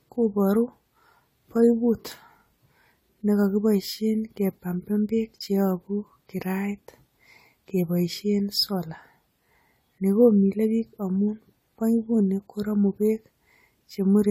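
Throughout the speech, the sound is swirly, smeared and hollow, with blurred consonant attacks and nothing above 19.8 kHz. This is likely generation loss: repeated AAC-LC re-encoding, around seven passes at what sounds like 64 kbit/s, with quantisation noise and spectral holes accumulating.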